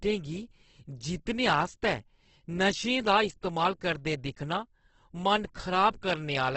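A speech clip with heavy damage throughout that is likely from Opus compression in its music-style CELT mode, at a rate that fits roughly 12 kbps. The voice sounds rough and grainy, with tonal parts smeared into noise-like texture as the encoder fills starved bands with folded or noisy energy. A spectrogram would show a hard ceiling near 8.2 kHz, with nothing above it, and a mottled, speckled fill below rather than clean harmonics or empty gaps.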